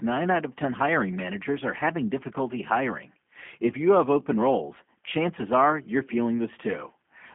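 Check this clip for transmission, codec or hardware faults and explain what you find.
One fault runs through the whole speech clip: G.729 codec damage. The band sits between 200 Hz and 3.4 kHz, with nothing above 3.5 kHz. The codec models each 10 ms frame with a tract filter, pitch predictor and few pulses. That fits 8 kbit/s coding. Speech sounds rough and plainly synthetic.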